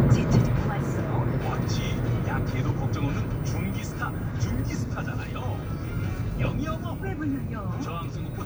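Listening closely to this recording of everyday sounds, nothing stood out as a technical problem at any point.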